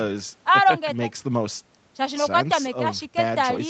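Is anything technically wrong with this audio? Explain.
No, nothing is technically wrong with this speech. It carries the character of a call path, with the bass trimmed by the microphone processing and nothing above about 8 kHz, which fits the Opus codec at a wideband setting.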